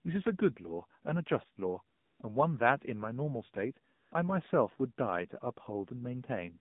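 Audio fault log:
throughout: AMR narrowband mobile codec. Speech is confined to about 150 Hz to 3.7 kHz and sounds plainly buzzy and synthetic, which fits a low bitrate near 7.4 kbps.
1.96–2.20 s and 3.94–4.12 s: AMR comfort noise. In pauses of 240 ms and 180 ms, the real background gives way to smooth synthetic noise that switches in and out.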